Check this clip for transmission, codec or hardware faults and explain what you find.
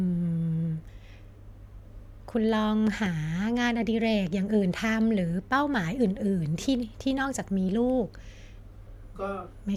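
One fault: a loud pop from 2.87 to 3.09 s, heard as two sharp pops in quick succession, peaking a few decibels above the speech, which carries on underneath. The likely cause is a sudden voltage step from a plug, switch or static discharge entering the signal chain.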